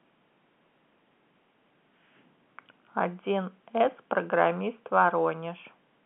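Nothing stood out on listening to this telephone-band speech clip.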